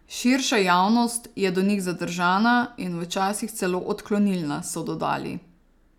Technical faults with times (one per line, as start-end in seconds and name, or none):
none